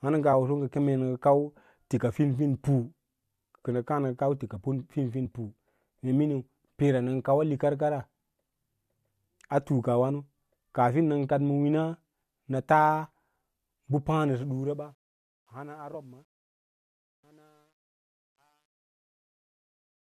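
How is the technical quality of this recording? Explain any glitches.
The recording has two kinds of fault: brief bursts of damaged data in a compressed stream, and truncation distortion during the closing fade.

Damaged data in a compressed stream occurs four times, at 5.25, 10.1, 13.12 and 15.94 s. Each is a short chirp or blip lasting under 20 ms. The compressed data at those points was corrupted, so the decoder misread the frames, lost sync and recovered at the next valid frame header. On a spectrogram, each event is a thin vertical smear of broadband or tonal junk that breaks the speech harmonics. The waveform shows a sudden discontinuity.

Truncation distortion on a fade begins at 14.09 s and runs to the end. From about 14.1 s the level fades out. However, the fade was rendered without dither at an effective resolution of 10 bits. As the speech drops toward the smallest step, the waveform collapses into a few stair-step levels. 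The sound turns grainy, worst from about 15.7 s onward. On a spectrogram, the speech harmonics dissolve into a fizzy, signal-dependent noise floor, and a zoomed waveform shows blocky, quantised steps.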